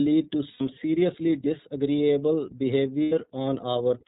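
The whole clip sounds band-limited and slightly rough and synthetic, with nothing above 4 kHz. This is the iLBC codec, a narrowband VoIP coder whose plainly audible damage fits its 13.33 kbps mode, which codes each 30 ms frame independently.

From 0.51 to 0.61 s, just before "seriously disagreeable", the sound briefly turns into a held, slightly buzzy vowel, and again from 3.03 to 3.13 s, just after "seriously disagreeable". These are lost iLBC frames. Each 90 ms gap points to three missing 30 ms frames, which the decoder filled by repeating the last pitch cycle mixed with noise. Because iLBC frames stand alone, the sound recovers almost immediately afterward.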